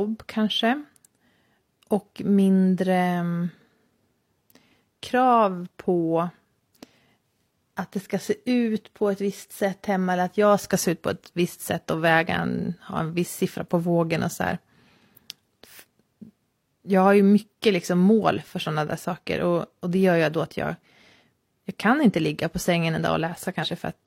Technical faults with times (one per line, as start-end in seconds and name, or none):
23.59-23.65 compressed frames skipped